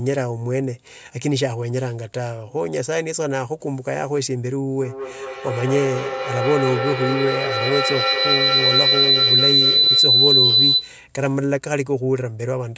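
Feedback howl runs from 4.81 to 11.04 s. Two devices sharing the call in one room create a loop, and each pass from loudspeaker back into the microphone adds level, so the echoes grow rather than fade. The sound narrows to a piercing tone around 4 kHz, with each trip around the loop taking roughly 200 ms, and peaks at about 6 dB above the speech before it stops.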